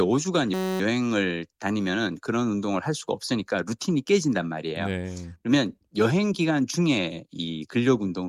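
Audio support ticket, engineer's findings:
System hang loop, 0.54–0.80 s: steady buzz at about 188 Hz, one 5.33 ms slice repeating. Fits a 256-sample ring buffer replaying while the driver stalled. Little or no audio lost.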